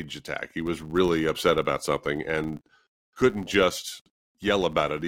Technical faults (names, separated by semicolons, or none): filter restarted on every block